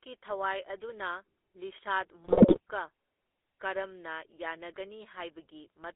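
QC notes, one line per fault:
Throughout: GSM full-rate codec. The speech is confined to a 300 Hz to 3.5 kHz telephone band and has a plainly audible buzzy, gravelly roughness. A coarse vocal-tract model driven by sparse, regularly spaced pulses produces this, consistent with a 13 kbps full-rate stream.
2.24 to 2.60 s: GSM bit errors. For about 0.36 s the speech breaks into squawks, pops and gargling. Corrupted filter, pitch and gain values reach the decoder, warping the spectrum and spiking the level frame by frame. The density points to several percent of bits flipped.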